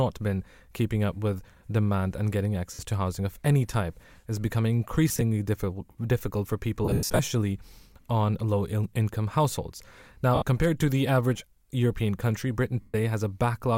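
Speech with lost LE Audio frames at 2.74, 5.09, 6.85, 10.35 and 12.81 s. The decoder fills each gap by repeating the last spectrum with random signs. Voiced sound becomes a noisy smear. The worst, after "difficult difficult for", loses about 250 ms and fades away.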